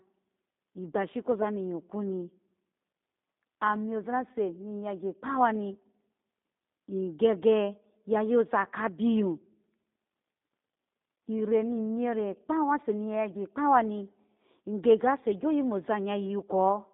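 From start to end, G.729 coding rebuilds the speech at what sounds like 8 kbit/s, leaving it rough and synthetic; the spectrogram shows nothing outside roughly 200 Hz to 3.7 kHz.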